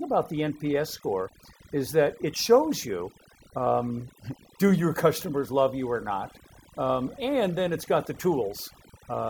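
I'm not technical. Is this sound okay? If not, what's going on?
No, there's overdone noise removal throughout. A cleanup tool was set too strong, so the background noise dropped and broke up into twinkling specks.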